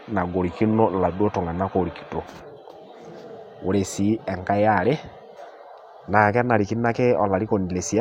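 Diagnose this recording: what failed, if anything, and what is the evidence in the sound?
Nothing failed in this recording. No stage of the chain, from the analogue wiring through conversion and processing to playback, leaves any audible evidence of a problem in the speech.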